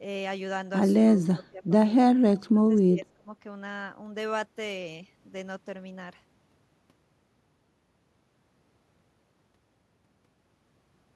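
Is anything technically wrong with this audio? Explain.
Yes. There are two kinds of fault.

Speech suppressed in double talk appears twice. From 1.34 to 1.70 s the level sinks by up to about 15 dB, and from 2.51 to 3.31 s it falls by up to about 20 dB, with roughly 0.7 s affected. The likely cause is an echo canceller meeting simultaneous talk from the far end. It could not tell this talker from its own loudspeaker echo, so it attenuated everything.

An echo leak sits between 2.36 and 2.42 s. It is a very faint, brief delayed copy of the speech, trailing by 234 ms at roughly 35 dB below the main signal. It is likely residual echo from a speakerphone whose canceller failed to remove all of the loudspeaker sound its microphone captured, so a short scrap was sent back down the line.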